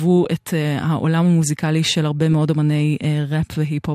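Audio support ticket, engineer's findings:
DAB burbling, 3.39 to 3.51 s: short noise blips in single sub-bands over the speech near the end. Weak DAB reception; residual bit errors past error correction corrupt MP2 sample data. The 0.12 s fits about five 24 ms frames.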